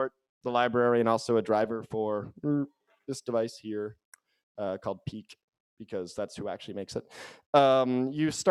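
No technical fault can be heard anywhere in this audio. At no point does anything in the sound call for a closer look.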